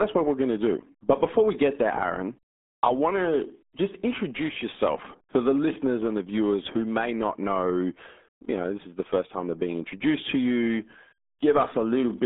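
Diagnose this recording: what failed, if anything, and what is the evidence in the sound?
The fault is at the codec stage: the whole speech clip has passed through the RealAudio 14.4 codec. From start to finish nothing survives above about 3.8 kHz, and the usable band sits between roughly 200 Hz and 3.6 kHz, which fits an 8 kbit/s RealAudio 1 stream. A plain telephone line would narrow the band the same way but leave it clean. Here the heavy low-bitrate coding also produces a muffled, gargly texture on every syllable.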